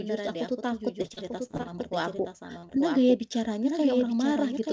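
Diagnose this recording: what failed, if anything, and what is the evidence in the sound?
Doubled audio track, throughout: a full-band copy of the speech trails about a second behind, roughly 5 dB down, with no room colour. That's likely a second capture path or an edit.

Repeated packet loss (robotic sound) from 1.02 to 2.30 s: nine network dropouts, the longest 28 ms, each patched by stretching the last sound. Roughly 15% of the stretch is concealment, so it goes choppy with pieces missing.

Short concealed packet loss at 2.59 to 2.65 s and 2.67 to 2.71 s: two more brief holes on the network leg, filled by the decoder, so you hear quick smears through the G.722 call path's 8 kHz band limit.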